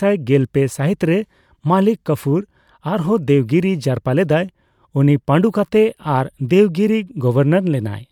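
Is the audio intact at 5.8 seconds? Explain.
Yes, the speech at 5.8 seconds plays through cleanly, with no dropout, click, distortion or other fault at that moment.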